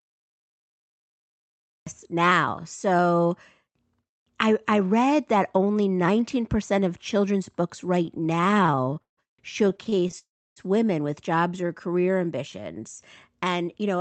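Speech carried over a call link, band-limited to about 8 kHz in a way that fits Opus wideband coding, with several faults. The recording or stream began late: the file holds digital silence from 0 s to 1.87 s, and the audio then starts abruptly in the middle of a sound, with no natural attack or fade-in. From 8.05 s to 9.19 s the packets kept arriving late, causing repeated stalls (stutter). Each time the jitter buffer ran dry, the receiver stretched out the last sound until fresh audio came in. There are nearly twenty such hold-ups, adding about 0.36 s in all, the longest 154 ms, so about a third of that stretch is filled-in sound. Nothing is lost, but the speech drags and stumbles. A second, milder stutter follows from 9.69 s to 10.15 s, with nine shorter stalls of at most 27 ms, adding about 0.11 s, roughly a quarter of that span. At 10.19 s to 10.58 s the audio stops as a call audio freeze: a brief continuation of the last sound dies away into about 0.31 s of silence, and the speech then resumes from where it left off. 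The likely cause is packets held up in transit, leaving the receiver with nothing to play, so it inserted about 0.38 s of extra delay without dropping anything. Finally, from 11.61 s to 12.61 s comes a jitter buffer slow-down. The receiver was rebuilding its reserve by repeating single pitch periods and fragments of pauses. That adds about 84 ms, so the speech plays at roughly 92% speed at an unchanged pitch, sounding slightly drawn out.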